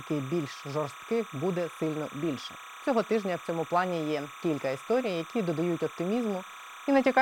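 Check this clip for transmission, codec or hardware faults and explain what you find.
One fault runs through the whole speech clip: timecode bleed. Linear timecode at 30 frames per second leaks in from a neighbouring track or cable. Its square wave flips between roughly 1 and 2 kHz, about 15 dB below the speech, producing a steady chirping warble. Unlike a fixed whistle or mains hum, it alternates between two pitches in a regular frame-rate rhythm.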